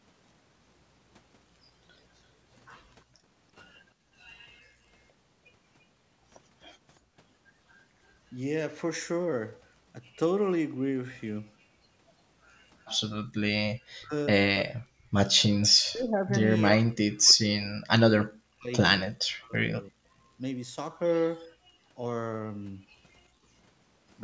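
The room sound behind the speech drops out suddenly at 3.04 to 3.27 s, again from 3.92 to 4.8 s, and briefly at 7.03 to 7.14 s, falling by about 35, 31 and 31 dB, then returning. This is background gated by the echo canceller: while the far side's audio played from the loudspeaker, the canceller pulled the microphone down hard, taking the ambience with it until it released.

From 13.98 to 15.16 s, and again from 15.85 to 20.07 s, the talker's own voice dips and cuts out in pieces, at worst around 40 dB down, for roughly three quarters of a second in the first stretch and about three seconds across the second. This is likely speech suppressed in double talk: with both sides talking at once, the canceller could not tell the near talker from loudspeaker echo and turned both down.

At 23.29 to 23.47 s the background gating returns in a shallower form, a dip of about 20 dB lasting a fraction of a second before the room sound comes back.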